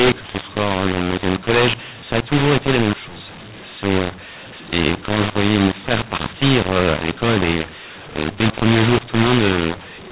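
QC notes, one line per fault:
Throughout, mu-law and A-law mixed up: the telephone audio was coded with the mu-law curve but decoded as A-law, so each 8-bit code is mapped back to the wrong level. Some samples come out too loud and others too soft, which makes the speech harsh and gritty. The quietest codes land well above silence, so pauses fill with noise. The narrow telephone band, with nothing above 4 kHz, is still audible beneath the damage.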